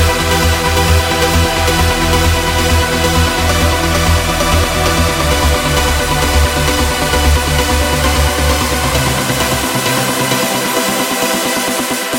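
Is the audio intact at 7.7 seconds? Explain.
Yes, the audio is intact at 7.7 seconds, with no dropout, click, distortion or other fault to be heard at that point.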